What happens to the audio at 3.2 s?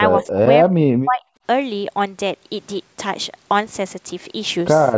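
Nothing goes wrong at 3.2 s: the speech there runs on intact, carrying only the ordinary band limit of call microphone processing, with nothing above 8 kHz and the lowest bass trimmed away.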